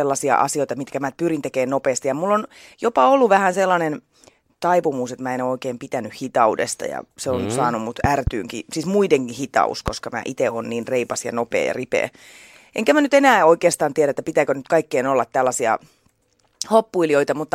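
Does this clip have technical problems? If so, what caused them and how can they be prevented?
Yes. A loud pop sounds as a quick double thump from 8.04 to 8.30 s, after "on mm saanut mut", and a single one at 9.88 to 9.90 s, after "siis muidenkin hitaus". Both are far louder than the speech, which carries on underneath. The likely cause is a sudden voltage step from a plug, switch or static discharge. Secure connections and avoid touching switches or cables while recording.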